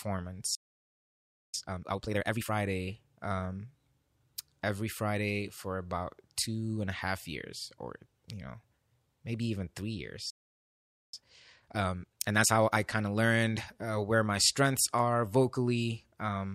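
At 0.55 s the speech cuts out for about 0.99 s, to 1.54 s, and again at 10.30 s, right after "maybe even three", for about 0.83 s, to 11.14 s. These are playback stalls, likely from the player running out of buffered data or being blocked. Each time, the speech picks up where it stopped.

After each gap comes time-compressed catch-up. From 1.54 to 2.52 s the speech runs at double speed, and from 11.14 to 12.78 s at 1.5 times, leading into "kind of learned uh". Both stretches sound hurried but keep their normal pitch. The player is cutting out small pieces and cross-fading the joins to clear the backlog left by the stall.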